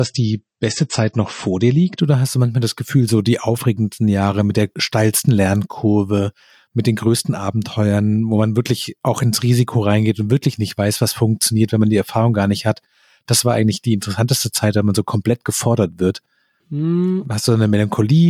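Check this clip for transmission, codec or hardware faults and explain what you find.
One fault is present: an adaptive stream starting at a low bitrate. From 0.0 to 2.0 s the speech is band-limited, with nothing above 8.3 kHz, and codec artefacts are stronger, which fits a low-bitrate MP3 around 32 kbit/s. The player began on that cheap version to start playback quickly, then switched to a better one, which fits roughly 128 kbit/s MP3, once it had measured the connection. At 2.0 s the treble returns and the artefacts ease abruptly, with no gap in the audio.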